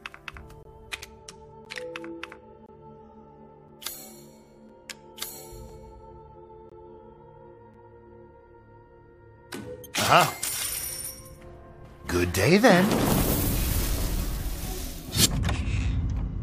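Gaps between stream segments cut the sound at 0.63–0.65, 1.65, 2.66–2.69, 3.68, 4.69, 5.69, 6.70–6.72 and 7.74 s, roughly once per second, which fits 1-second segments. Timestamp mismatches leave 3 to 25 ms hard-edged silences, with nothing missing.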